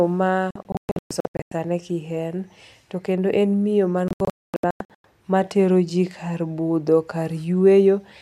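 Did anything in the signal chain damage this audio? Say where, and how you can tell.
Yes, a digital broadcast dropout at the reception stage, twice. From 0.51 to 1.52 s the speech breaks into a string of short mutes, about 620 ms gone in total, the longest hole 120 ms. Right after "miyo man" it happens again from 4.08 to 5.05 s, about 670 ms lost with one 240 ms gap. The receiver was rejecting bad frames and muting until clean ones arrived, so those stretches are simply gone.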